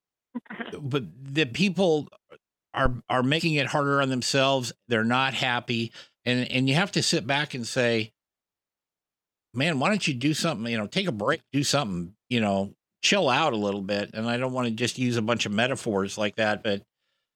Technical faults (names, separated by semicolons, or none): phantom power thump